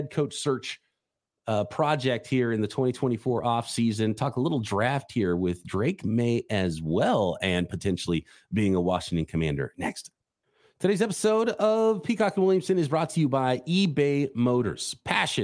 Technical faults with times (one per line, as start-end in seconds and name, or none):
none